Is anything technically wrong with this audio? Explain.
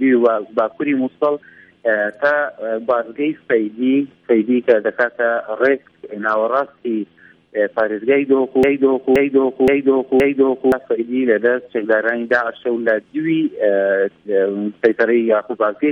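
Yes. From 8.63 to 10.72 s there is a broken-record loop: a 0.52 s fragment repeats four times back to back, likely from a stalled player or stream resending its last buffer. The audio for that span is lost.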